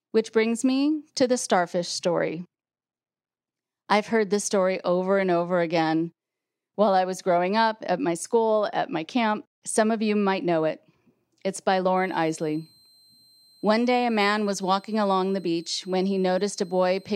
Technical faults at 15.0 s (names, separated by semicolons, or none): switching supply whistle